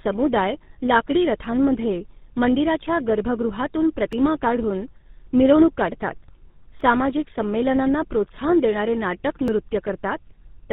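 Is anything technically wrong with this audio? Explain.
Yes, two faults are audible.

Throughout, tandem speech coding: the speech passed through GSM full rate twice, with G.711 between, each stage recoding earlier damage, leaving rough, warbly, muffled speech with nothing above 3.8 kHz.

From 1.45 to 9.48 s, clock drift buffer slips: a click roughly every 2.68 s, about four in all, likely from mismatched device clocks dropping or repeating short blocks of samples.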